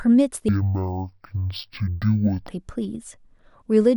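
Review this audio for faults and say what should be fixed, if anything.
From 0.49 to 2.49 s there's a stereo read as mono fault: the interleaved left and right samples get played back as one channel, so the speech drops to half speed and sinks a full octave (12 semitones). To prevent it, check the channel count in the file header before decoding.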